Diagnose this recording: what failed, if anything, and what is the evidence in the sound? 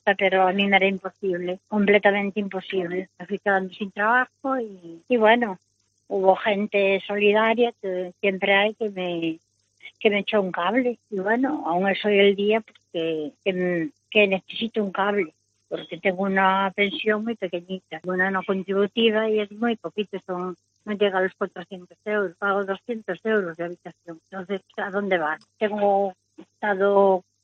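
Nothing failed here that I can hear; none of the stages from the wiring through to playback leaves any mark of trouble anywhere in the recording.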